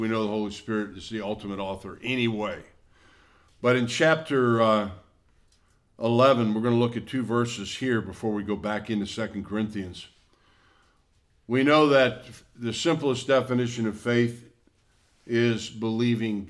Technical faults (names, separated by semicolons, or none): none